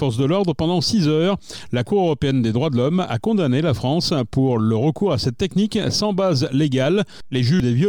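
Damaged data in a compressed stream breaks the decoding near the very end, from 7.60 to 7.63 s: the decoder hits corrupted bytes, loses its place and hunts for the next valid frame header, leaving a brief glitch of about 30 ms in the audio.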